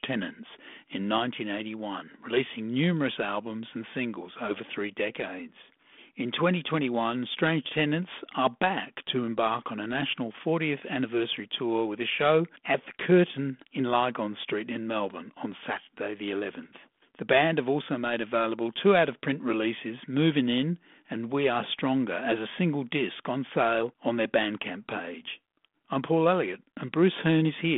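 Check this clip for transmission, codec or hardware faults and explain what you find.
No faults can be heard anywhere in the speech. What comes through is the telephone path itself, G.726 ADPCM at 32 kbit/s, which confines the sound to a 200 Hz to 3.5 kHz band with nothing above 3.8 kHz and leaves only a light trace of its coding.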